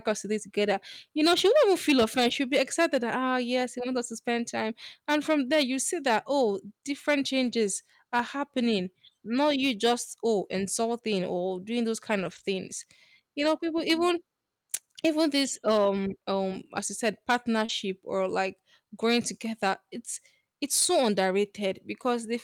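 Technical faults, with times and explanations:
Throughout: hard clipping. The level runs about 8 dB past what the chain can carry, so roughly one percent of samples, the loudest peaks, are sliced flat. The squared-off tops add high harmonics, heard as crackle or harsh fuzz on loud syllables.
2.19–2.33 s, 7.43–7.53 s, 12.19–12.41 s (after "insulting or doing those"), 13.39–13.45 s, 15.71 s and 17.69 s: lost packet rebuilt from error correction. The sound never drops out. Instead, 20 to 120 ms stretches turn rougher and grainier, because the decoder played low-bitrate backup copies carried in the following packets.
17.65–17.71 s, between "um as you said" and "or like growing together": short concealed packet loss. About 40 ms never arrived. The decoder extended the preceding sound for roughly 32 ms and blended back, leaving a brief smear or wobble, unlike the merely rougher backup-copy frames.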